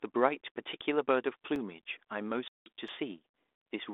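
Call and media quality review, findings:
Block of digital silence, 1.56 s. Hard dropout, about 2.7 ms, heard as a tick. Fits a 128-sample buffer left unfilled. Probable component: playback or processing thread missing its deadline.
Block of digital silence, 2.88 s. Same symptom, about 5.3 ms, fits a 256-sample buffer. Same likely path, a buffer underrun writing zeros.

Packet loss on ADPCM call, 2.48 to 2.70 s. Abrupt 180 ms hole, roughly twenty packets. Speech resumes slightly distorted. G.726 decoder's predictor and step size out of sync with sender, then recovering.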